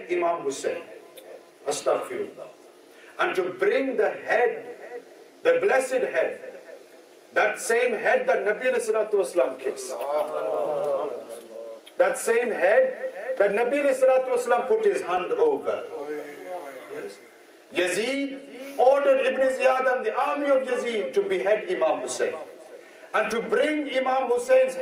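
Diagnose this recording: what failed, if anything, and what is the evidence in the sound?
The codec stage failed: a corrupt frame decoded as if valid, with damaged bits misplacing energy across frequencies. A brief chirp, blip or noise burst appears at 1.81–1.84 s, peaking around -30 dBFS, then at 21.88 s around -25 dBFS, each spanning a few frames.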